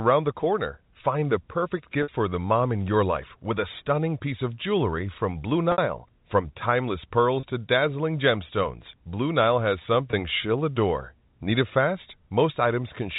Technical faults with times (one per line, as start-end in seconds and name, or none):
2.03-2.08 packet loss with pitch repetition
5.72-5.78 packet loss with pitch repetition
7.40-7.43 packet loss with pitch repetition
10.11-10.13 packet loss with pitch repetition